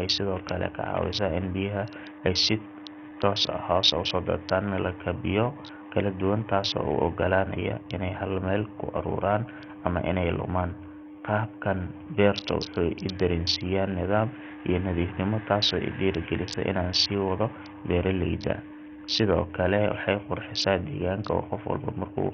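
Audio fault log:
Throughout: Bluetooth SBC compression, likely; starved upper sub-bands lose their treble, which flickers as patchy blocks on a spectrogram, with gritty noise suggesting a bitrate near 48 kbps.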